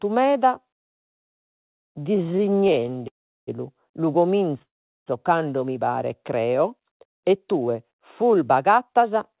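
From 1.18 to 3.06 s the speech drags and stutters, with the last sound held over and over in more than thirty brief gaps, the longest 110 ms, filling about a quarter of that stretch. These are repeated stalls (stutter): packets kept arriving late, so the jitter buffer kept running dry and the receiver extended the last sound until it could continue. Nothing is lost, but the speech falls behind.

Right after, from 3.08 to 3.49 s, the sound hangs briefly and then drops to silence for most of the 0.4 s before resuming where it stopped. The same happens again from 4.62 to 5.08 s, just before "cando mi paret". Both are call audio freezes, likely from packets held up in transit and the buffer emptying. Each inserts a gap into the speech without removing anything.

After "cando mi paret", from 6.72 s to 9.38 s, the speech runs about 8% fast at unchanged pitch and sounds hurried. This is a jitter buffer speed-up. 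Once the buffer had accumulated too much delay, the receiver trimmed many tiny pitch-period slices, roughly a fifth of a second in total, to catch up. Throughout the clip the sound has nothing above 4 kHz, which fits a narrowband G.711 call codec.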